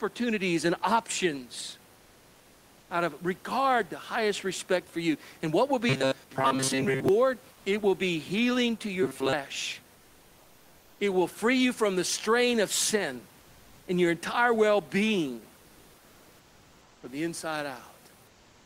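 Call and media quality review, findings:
Comfort noise in place of the background, 1.95–2.89 s, after "and options", before "out of regard the": real room noise, about 32 dB below loud speech, swapped for flat synthetic hiss, about 2 dB quieter. Likely discontinuous transmission, consistent with Opus DTX. Spectrogram: textured floor turns uniform.

Same, 7.53–7.65 s: 120 ms patch at unchanged level. Smooth, featureless band; waveform shows no level step.

Same, 18.27–18.65 s to end: steady hiss about 2 dB down from the genuine room noise, which elsewhere sits about 30 dB below speech.

Robotic sound from repeated short buffers, 5.89–7.09 s, after "what will": metallic buzz at 133 Hz, roughly two thirds of audio replaced by repeats. Likely jitter-buffer underrun looping the last block, which fits a 7.5 ms buffer. Spectrogram: harmonic comb at 133 Hz spacing.

Same, 9.03–9.33 s, after "will be healing to": identical 133 Hz buzz. 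Waveform shows one short segment repeating with identical shape, period about 7.5 ms.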